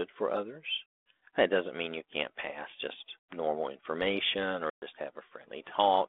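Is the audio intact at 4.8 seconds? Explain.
No. At 4.8 seconds you're inside a packet loss on an ADPCM call, running from 4.70 to 4.84 s, with roughly 120 ms of audio dropped to a hard-edged silence. Afterwards the 32 kbit/s decoder's predictor and step size have drifted off the sender's, so speech comes back slightly distorted before settling.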